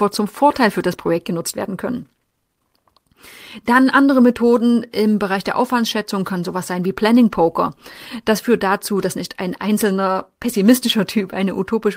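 No technical faults are audible.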